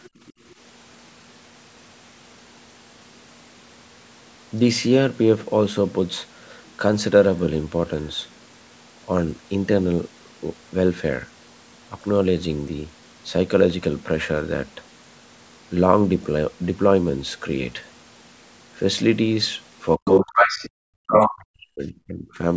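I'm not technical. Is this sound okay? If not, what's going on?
No, there are a few problems, mostly bunched near the end.

Other side's voice leaking through: right at the start, around 0.04 to 0.09 seconds, there's a faint scrap of a second voice. It comes back much louder, roughly as loud as the talker or louder, at 20.05 to 20.2, 20.36 to 20.7 and 21.12 to 21.31 seconds. That's likely the call's echo canceller failing to strip out the loudspeaker sound the microphone picked up.

Background gated by the echo canceller: just after that first scrap, between 0.09 and 0.43 seconds, the room sound sinks sharply for about a fifth of a second, then comes back. The canceller clamped the microphone while the loudspeaker was playing.

Speech suppressed in double talk: from 19.97 to 20.63 seconds, and again from 20.84 to 22.44 seconds, the talker's voice dips hard or drops out in pieces, for around two seconds altogether. 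Both sides were probably talking at once, so the canceller likely couldn't tell them apart and turned everything down.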